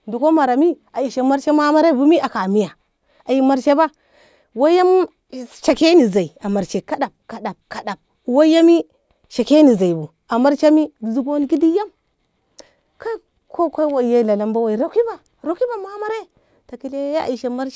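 No technical faults can be heard anywhere in the speech recording, and the signal holds steady throughout without any break or disturbance in its transmission or playback.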